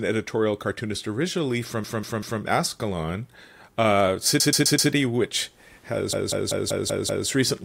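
Repeated frames stutter the speech at 1.84 to 2.42 s, 4.40 to 4.91 s and 6.13 to 7.28 s. Short compressed blocks, 192 ms, 128 ms and 192 ms, replay three, four and six extra times, with the speech stretched accordingly.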